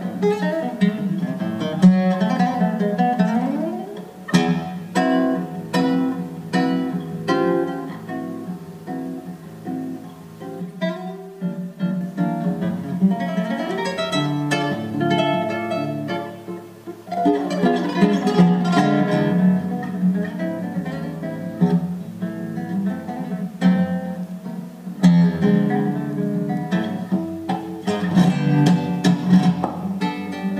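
From 10.6 to 12.0 s the sound turns hollow and phasey: channel delay causing comb filtering, with one channel lagging by around 5 ms before a mono sum, cutting evenly spaced notches starting near 100 Hz. Unlike flanging, the notches stay fixed rather than sweeping.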